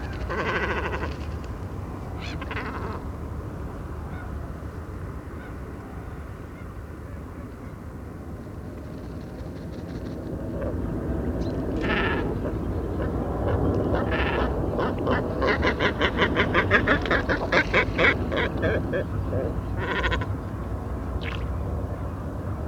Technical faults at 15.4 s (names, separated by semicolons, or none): video or display buzz